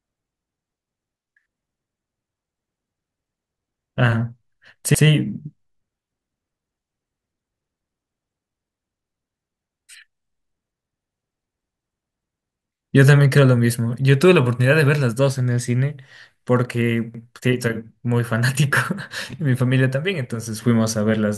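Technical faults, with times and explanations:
4.95–5.05, 11.05–11.15 and 17.15–17.25 s: overlapping chunks. Each 6 s block starts 100 ms early, so that slice of speech replays, giving a regular stutter.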